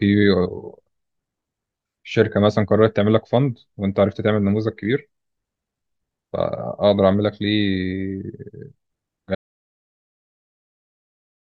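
The input feeding the recorder was most likely lost at 9.35 s, whether through a disconnected device, a broken link or an accidental mute, and the recording simply kept writing silence from then on. The result is an audio dropout to silence: the speech stops abruptly mid-flow and is replaced by silence, with no room tone or background hiss left, and nothing returns before the clip ends about two seconds later.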